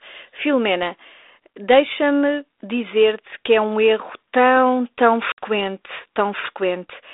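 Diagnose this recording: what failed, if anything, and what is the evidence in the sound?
Network stage: packet loss on an ADPCM call. At 5.32 s the speech drops into a hard-edged hole of silence lasting about 60 ms, ending near 5.39 s. That fits a few lost packets. The G.726 link at 32 kbit/s carries only the 300 Hz to 3.7 kHz telephone band. ADPCM sends differences from an adaptive prediction. With packets missing, the receiver's predictor and step size drift from the sender's. The speech resumes slightly distorted until the decoder re-converges.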